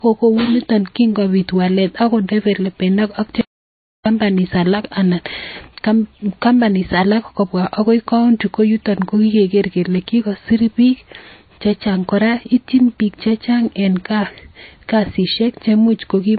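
Low-bitrate audio saved at a high bitrate runs through the whole speech clip. Nothing is present above 4.5 kHz, and the speech carries the smeared, watery texture of heavy MP3 compression. This likely comes from a low-bitrate MP3 source, on the order of 24 kbit/s, later re-encoded at a much higher rate such as 192 kbit/s. The second pass cannot restore the band or detail discarded by the first, so the limits of the original encode remain audible throughout.

An audio dropout to silence occurs from 3.41 s to 4.06 s, a gap of about 650 ms. The speech cuts off abruptly and resumes just as suddenly, and the interval in between is silent with no room tone at all. The likely cause is a momentary loss of the input signal, from a disconnect or a brief mute, while recording continued and filled the gap with silence. Whatever was spoken during that span is missing.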